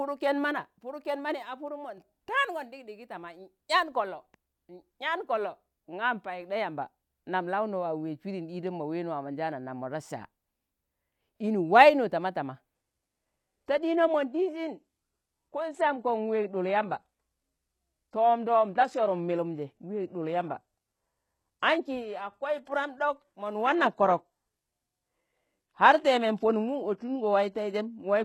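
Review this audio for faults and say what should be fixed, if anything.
A digital gain setting was most likely applied without a ramp at 1.68 s, just after "ken mani a". The speech and the background noise drop together by about 4 dB in a single step, holding there until 1.98 s before returning, so for about 0.3 s the whole signal sits lower. The step edges are abrupt and can click. This sudden gain jump should be fixed by ramping any gain change over several milliseconds rather than applying it instantly.

From 12.75 s to the end, the adaptive stream dropped to a lower-bitrate rendition, and the quality falls with no gap. Nothing is reproduced above 12.3 kHz. Treble loses its natural texture, and codec artefacts become more noticeable. The sound fits a move from AAC-LC at 96 kbit/s down to HE-AAC at 16 kbit/s, where the upper band is synthesised rather than coded. To prevent the adaptive stream at a lower bitrate, deliver the recording at a fixed, adequate bitrate, or raise the bitrate floor the player is allowed to switch to.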